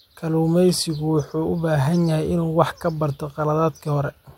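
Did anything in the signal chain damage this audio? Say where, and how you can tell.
No, no damage anywhere.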